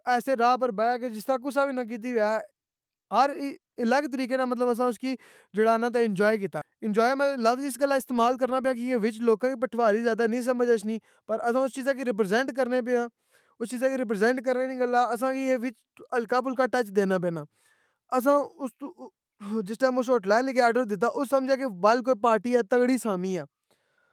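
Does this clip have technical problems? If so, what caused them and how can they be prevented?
Yes. At 6.61 s there is a skip ahead: roughly 0.4 s of the speech is missing and the two sides are butted together with no silence or fill between them. That joining is what separates it from a dropout, which would leave an audible gap. The cause is a stretch of audio discarded in transit or by an overflowing jitter buffer while later audio was already queued. Sizing the jitter buffer adequately and dropping audio gradually rather than in one block would prevent it.

From 6.71 s to 8.84 s, just before "کے وچ", a jitter buffer speed-up follows. Playback runs at about 109 % as the receiver trims short pitch-period-length pieces over and over, shedding roughly 0.2 s of backlog, so the speech sounds hurried. Unlike a sample-rate or resampling error, the pitch stays where it was; only the pace changes. 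Steadier network delivery, so packets don't arrive in bursts, together with gentler buffer adaptation, would prevent it.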